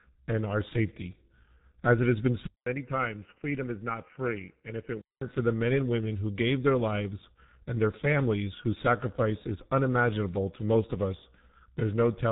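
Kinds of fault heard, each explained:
G.723.1 codec, throughout the clip: this early internet-telephony speech codec codes the signal in 30 ms frames at a very low rate, and the heavy damage heard here points to roughly 6.3 kbit/s. Nothing survives above 3.8 kHz, so the speech sounds muffled and boxed-in. Because the codec's model of the voice refreshes only once per frame, the tone turns hoarse and grainy and quick consonants smear into their neighbours.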